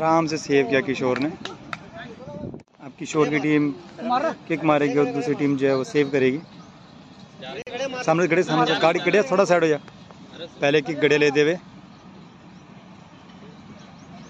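A gap at a join of encoded pieces opens from 7.62 to 7.67 s, a gap of about 47 ms. Separately encoded segments were spliced without removing the encoder's start delay and final-frame padding, so continuous sound drops out with smeared edges, then resumes where it stopped.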